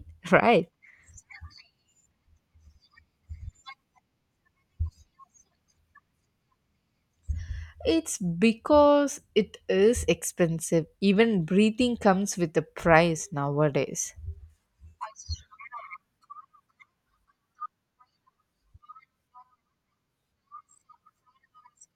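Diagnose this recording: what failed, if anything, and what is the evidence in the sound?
Nothing in the signal chain has failed: the speech stays continuous and stable at a steady level throughout, with no audible interruptions, distortion or defects at any stage.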